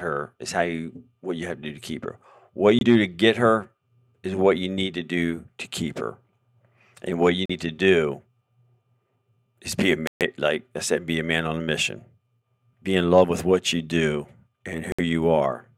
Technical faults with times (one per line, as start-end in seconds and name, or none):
2.79-2.83 Bluetooth stall
7.46-7.51 Bluetooth stall
10.07-10.23 Bluetooth stall
14.92-14.99 Bluetooth stall